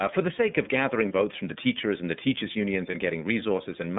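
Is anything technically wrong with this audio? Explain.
Yes. The whole recording has passed through the iLBC codec, and it has two short dropouts where iLBC frames were lost.

The iLBC codec affects the full clip. The audible band runs only from about 150 Hz to 3.6 kHz, and each block of sound is coded independently, which fits iLBC's 30 ms frame mode. The speech is plainly rough and slightly synthetic. A spectrogram would show an empty region above 3.6 kHz.

Lost iLBC frames occur from 1.08 to 1.11 s, between "for the sake of" and "votes from the teachers", and from 2.90 to 2.96 s, just after "and the teachers' unions". Each gap is concealed by repeating the last pitch cycle mixed with noise, so it sounds like a held, buzzy vowel. On a spectrogram the harmonics flatten into a smeared patch, and clean speech resumes immediately afterwards.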